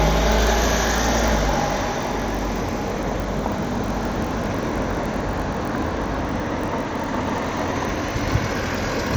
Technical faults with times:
0.00-9.16 MP2 compression
0.00-9.16 block size mismatch (padded)

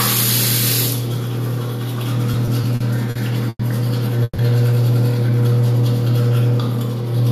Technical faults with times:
2.31-3.61 repeated stalls (stutter)
4.23-4.40 call audio freeze
5.23-5.49 jitter buffer slow-down

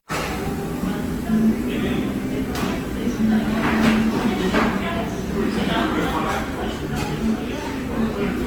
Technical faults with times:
0.00-8.47 generation loss
7.03-7.07 loud pop

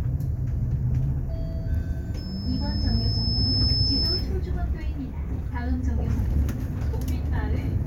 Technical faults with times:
2.17-4.31 loudspeaker feedback squeal

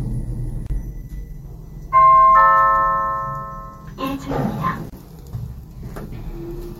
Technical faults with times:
0.66-0.70 gap at a join of encoded pieces
4.90-4.92 gap at a join of encoded pieces

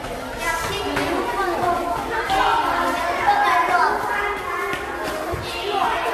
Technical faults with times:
0.00-6.13 generation loss

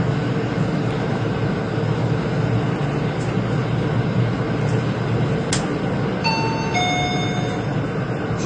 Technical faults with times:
0.00-8.46 AAC compression
0.91-8.33 clock drift buffer slips

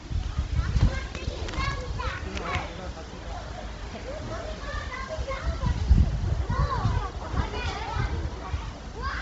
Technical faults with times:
0.00-9.21 Bluetooth LC3 compression

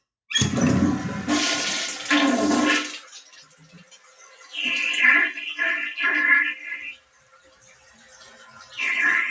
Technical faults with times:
0.00-9.30 noise suppressor applied to music or sounds
3.00-4.54 sound cut by the noise suppressor
6.92-8.78 sound cut by the noise suppressor

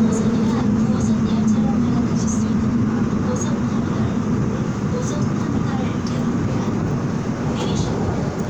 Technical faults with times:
none

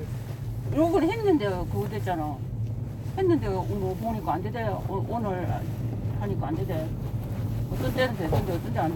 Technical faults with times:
none

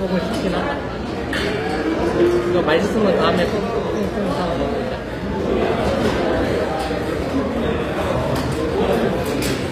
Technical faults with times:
0.00-9.72 HE-AAC compression

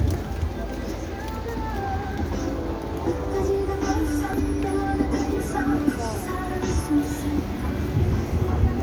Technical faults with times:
4.33 damaged data in a compressed stream

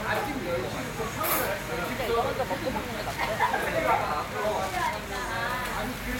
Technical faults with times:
2.99-6.19 Wi-Fi interference

